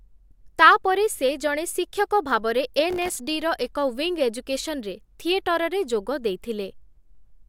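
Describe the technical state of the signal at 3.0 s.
At 3.0 s there is processor overload crackle, running from 2.90 to 3.20 s, just after "ସେ ଜଣେ ଶିକ୍ଷକ ଭାବରେ". About twenty very short buffers, around a millisecond and a half each, miss their deadlines. Each leaves a hard-edged gap of silence. Together they sound like gritty tearing over the speech.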